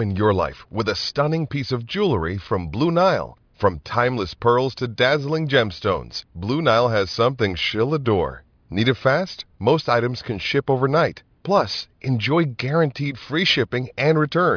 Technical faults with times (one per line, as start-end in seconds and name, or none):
none